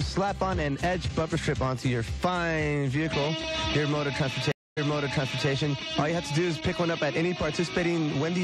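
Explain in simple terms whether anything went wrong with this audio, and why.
Something went wrong at 4.52 seconds: a stream reconnect. The connection dropped, so the player went quiet for about a quarter of a second. It then reconnected and started decoding again from scratch. The server sent back a bit of audio it had already played. So when the sound returns, it jumps back about 0.72 seconds, and you hear a short stretch twice. The whole disturbance lasts until about 5.49 seconds.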